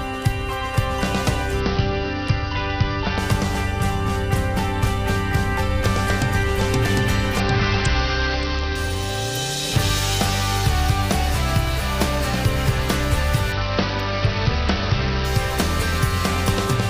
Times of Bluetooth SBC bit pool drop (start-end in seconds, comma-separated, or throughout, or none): 1.60-3.18, 7.40-8.75, 13.52-15.25